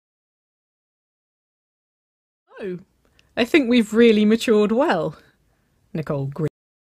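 The fade-in that brings the level up from around two and a half seconds to full by 3.08 s is a smooth editorial ramp. At 6.48 s the speech has a cut-off end. The final buffers of audio were never written, so the sound stops mid-syllable and drops straight to digital silence with no natural decay. On a waveform the trace falls from the ongoing signal to a flat line in one vertical edge. A spectrogram shows energy ending abruptly across all frequencies.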